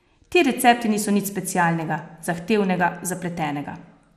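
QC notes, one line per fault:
Throughout, MP2 compression: the speech sounds dull and carries a gurgling, granular roughness, with nothing above 14.8 kHz. Upper sub-bands have been switched off and those left are coarsely quantised. This is likely MPEG Layer II coding at a low bitrate, around 80 kbps.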